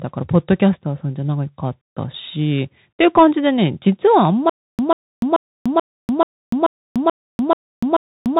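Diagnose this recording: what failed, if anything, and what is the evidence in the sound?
The codec stage shows a Bluetooth CVSD headset codec throughout. On a spectrogram there is a hard ceiling near 3.8 kHz, with no energy above it. Underneath sits a granular hiss, s sounds come out scratchy, and loud high-frequency moments distort audibly where the one-bit up/down coder's adaptive step cannot keep pace with the waveform's slope. That combination of narrowband limit and slope-overload grit fits a 64 kbps CVSD headset link.

From 4.50 s to the end there is a stutter with silent gaps at the playback or buffering stage. The same 140 ms burst plays, then about 293 ms of digital silence follows, and the cycle repeats evenly every 434 ms, nine times. On the waveform this appears as identical blocks separated by silence. The likely cause is a stalled stream whose player replays its last fragment on each retry and then runs dry, so the intervening audio is lost.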